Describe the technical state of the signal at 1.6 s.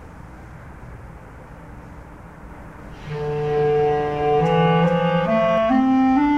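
At 1.6 s the signal is intact, with no audible fault at that moment.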